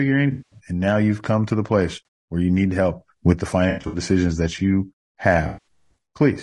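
From start to end the speech sounds rough and grainy. There is noise between the harmonics, and the top band sounds thin and synthetic. The likely cause is low-delay AAC compression of the AAC-ELD kind used for video calls. Its short frames give coarse frequency resolution, and at this low bitrate the damage is plainly audible. The grain fits a bitrate around 32 kbps.

AAC frame loss with concealment first hits at 0.31 to 0.59 s, just before "and now you've come". About 200 ms is missing. The decoder repeats the last good spectrum, so the gap turns into a smeared, noisy patch. At 2.05 to 2.07 s, between "come to the place" and "where you need help", a 20 ms loss leaves a brief phasey blip. At 3.69 to 3.99 s, after "need help with the" and before "that you", about 160 ms of losses are scattered across 240 ms. The longest run lasts under a tenth of a second, so the sound smears. At 5.47 to 5.67 s, 180 ms goes missing, which gives another noisy, smeared stretch.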